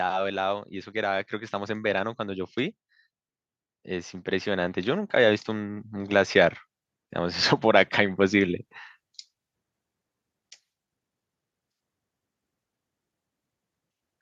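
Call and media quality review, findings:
Automatic gain rising, 0.31–2.84 s and again 3.85–6.62 s. Speech and background noise swell together by about 5 dB over roughly 2.5 s and 2.8 s respectively. AGC stage judged the input too quiet and ramped its gain slowly upward.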